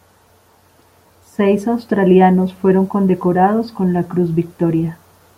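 No dropouts, distortion or other technical faults can be heard anywhere in this speech recording.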